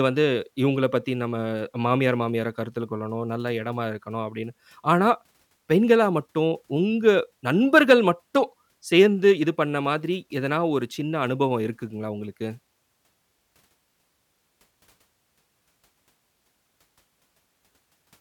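No technical faults can be heard anywhere in the recording.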